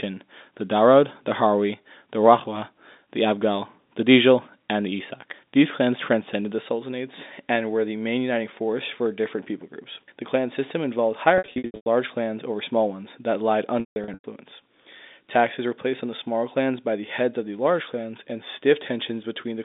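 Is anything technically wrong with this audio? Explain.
Yes. Two bursts of packet loss with pitch repetition break up the speech, heard over a telephone-band line that follows G.711 mu-law coding, which passes roughly 200 Hz to 3.7 kHz.

From 11.38 to 11.86 s, after "clan system involved" and before "large clans over small", about 360 ms of audio is missing, scattered across 480 ms with runs up to 100 ms. From 13.80 to 14.24 s, after "small ones that lied", about 300 ms is lost across 440 ms, the longest run 160 ms. Each gap is bridged by replaying the last pitch period, so the sound holds a buzzy, frozen tone that fades out and then cross-fades back into the speech. On a spectrogram these stretches show flat, repeated harmonic bands with no formant movement, and the longer runs dim to silence. In the waveform they appear as identical repeating cycles that shrink in amplitude.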